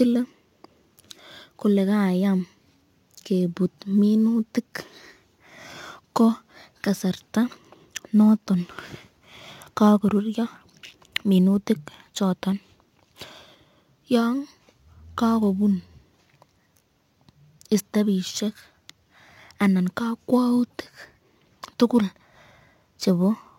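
Sample clock jitter runs through the whole recording. The converter's clock wanders by several microseconds rms, so each sample is taken slightly off its proper instant, and the resulting amplitude error grows with how fast the waveform is changing. On this speech it adds a fine hiss and roughness, with the error sitting around 35 dB below the signal. The hiss is most obvious on loud passages and bright, sibilant sounds, and it disappears in the pauses.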